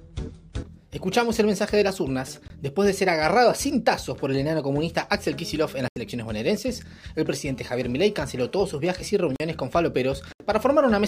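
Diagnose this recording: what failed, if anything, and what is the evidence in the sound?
The output buffer was likely not filled in time on four occasions, a driver or buffer failure that left blocks of digital silence. The sound drops straight to silence and returns with no fade: 2.48–2.50 s (20 ms), 5.88–5.96 s (80 ms, an audible hole), 9.36–9.40 s (40 ms) and 10.33–10.40 s (about 75 ms). Missing-buffer dropouts have exactly this hard-edged, full-band loss.

A 2G phone in an active call was close enough to the analogue wiring that the audio circuit rectified its radio pulses, causing GSM phone buzz. From 7.5 to 8.6 s there is a steady, raspy buzz at 217 Hz, rich in harmonics and about 30 dB below the signal. It is unrelated to the programme material because it is the rectified envelope of the phone's transmit bursts, which repeat 217 times a second.

Immediately after, from 8.67 to 9.51 s, the same phone switches to GSM signalling bursts. 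Its user is silent in the call, so it transmits only short groups of bursts instead of a continuous stream. The interference pickup in the analogue wiring therefore becomes even ticks with a longer 217 Hz buzz twice a second, at roughly the same low level as the buzz. The 9.36 s dropout falls inside this stretch.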